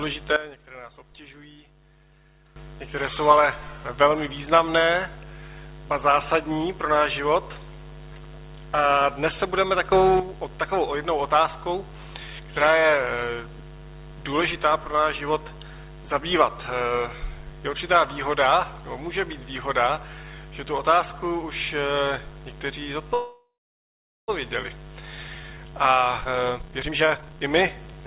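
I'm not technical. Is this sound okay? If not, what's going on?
No. There are three kinds of problem.

Sudden gain jump, 0.36 to 2.56 s and 9.92 to 10.20 s: in the first stretch the sound, background included, abruptly becomes much quieter, then snaps back. In the second it briefly becomes much louder. The likely cause is a volume setting being applied instantly rather than eased in, so the level leaps between two neighbouring moments instead of changing smoothly.

Call audio freeze, 23.14 to 24.30 s: the sound stalls for just over a second. The last bit of sound is stretched into a fading buzz, then about 0.78 s of silence follows. The likely cause is that pieces of the call were held up in transit and the receiver ran out of sound to play. Nothing is lost. The sound picks up where it stopped, just later.

Jitter buffer speed-up, 25.20 to 28.01 s: after the stall, the receiver has a backlog of delayed sound. 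To catch up, it snips out many tiny slices, roughly a second in total. The result plays at about 137% of normal speed with the pitch unchanged, so it sounds hurried.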